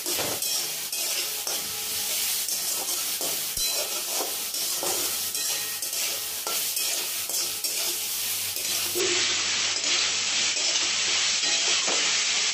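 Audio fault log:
9.00 to 12.53 s, input switched to a poorer device: the sound abruptly turns duller, with nothing above 7.9 kHz. The level shifts by a few decibels. A new, faint background noise appears. No gap is heard. The likely cause is a change to a narrower-band input device.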